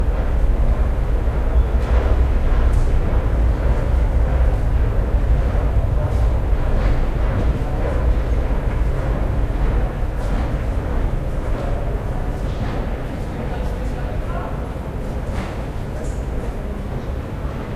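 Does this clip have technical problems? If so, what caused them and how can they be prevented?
No, no technical faults are audible.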